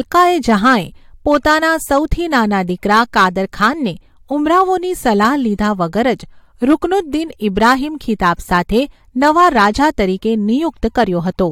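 Hard clipping runs through the whole speech clip. The signal was driven about 5 dB past what one stage could pass, so roughly one percent of samples hit the ceiling and flatten. Loud syllables crackle on their peaks. The waveform shows squared-off peaks, and the spectrogram shows vertical smears of high harmonics at each peak.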